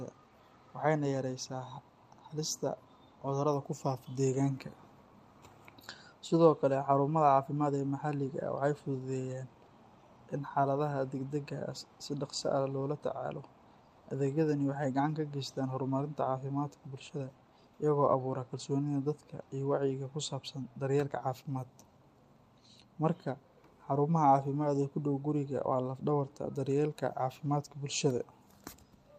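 A speech recording with no technical fault to point to. Nothing in it calls for a time or a cause.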